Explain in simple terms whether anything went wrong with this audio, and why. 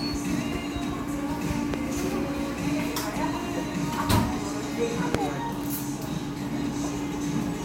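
Yes, something went wrong. There are two loud pops. The first comes at 1.74 to 1.76 seconds and the second at 5.15 to 5.17 seconds. Each is a single sharp crack, lasting only about two hundredths of a second. Both stand well above the everyday sounds around them, and the second is louder. The sound carries on underneath. The likely cause is a sudden electrical jolt, such as from a plug, switch or static, which adds a brief spike to the signal.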